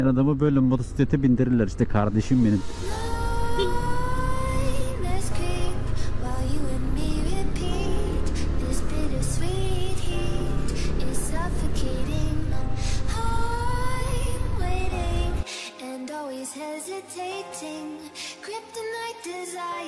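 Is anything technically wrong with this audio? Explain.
No, no technical faults present.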